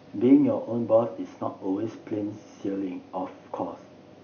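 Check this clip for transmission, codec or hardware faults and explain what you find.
No transmission, codec or hardware faults.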